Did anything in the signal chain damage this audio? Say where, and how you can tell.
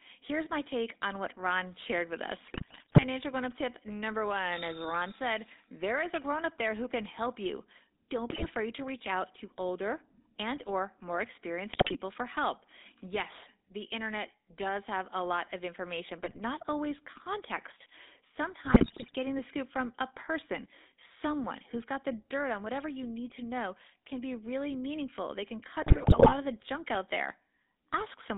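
Yes. The speech has a buzzy, gravelly roughness throughout, with nothing below 250 Hz or above about 3.7 kHz. That points to the GSM full-rate codec at 13 kbps. It rebuilds the voice from a vocal-tract filter driven by sparse, regularly spaced excitation pulses, which produces the buzz.

Squawks, pops and gargling break through at 2.46–3.05 s, 8.30–8.51 s, 11.72–11.97 s, 16.24–16.40 s (after "a lot of information", before "always context"), 18.64–19.16 s (before "the scoop from a") and 25.82–26.33 s (before "of the junk out"). These are GSM bit errors on a weak radio link. The corrupted filter, pitch and gain values warp the spectrum and spike the level in each damaged frame.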